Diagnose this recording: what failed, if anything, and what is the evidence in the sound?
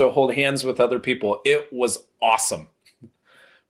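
Gain pumping runs through the whole speech clip: the gain swings by roughly 10 dB, pulled down under every loud syllable, leaving loud and soft passages squashed together. The likely cause is input gain set far too high, with a fast limiter or compressor in the processing chain clamping each peak.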